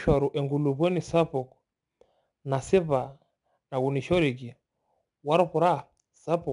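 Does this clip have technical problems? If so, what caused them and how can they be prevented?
Yes, 4-bit ADPCM compression runs through the whole speech clip: gritty hiss riding every loud syllable, nothing above 10.7 kHz, consistent with roughly 89 kbps. Keep a higher-quality master and encode from it with a better codec.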